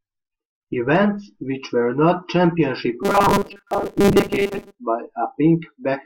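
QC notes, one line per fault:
3.03–4.77 s, robotic sound from repeated short buffers: the speech turns into a rigid, metallic buzz fixed at 200 Hz that still loosely tracks the words. The likely cause is fresh audio arriving too slowly, so playback keeps looping the last short chunk of sound while most of the real signal in this stretch is skipped. Each repeat lasts about 5 ms, which fits the 200 Hz buzz.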